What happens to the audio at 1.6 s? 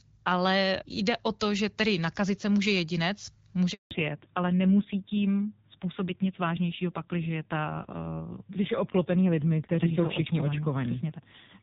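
Nothing goes wrong at 1.6 s; the speech there comes through intact, carried by the AMR wideband (HD Voice) codec at 12.65 kbit/s.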